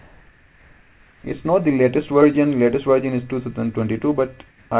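From 0.0 to 1.24 s, and again from 4.48 to 4.7 s, comfort noise replaces the background: a steady, featureless hiss without the real background's detail, its level within about 1 dB. Discontinuous transmission likely caused it, with the receiver synthesising noise during the sender's pauses.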